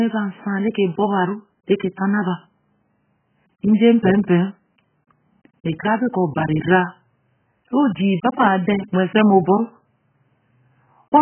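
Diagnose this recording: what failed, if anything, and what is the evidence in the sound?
The failure is at the codec stage, and it runs through the whole speech clip. Nothing is present above about 3.1 kHz, so the sound is dull and boxed in. Sibilants turn fizzy and smeared, and sustained sounds warble. The likely cause is heavy AAC compression, AAC-LC at a very low bitrate, which fits something near 8 kbps. The encoder lowered its cut-off and quantised the remaining bands coarsely, leaving spectral holes that waver from frame to frame.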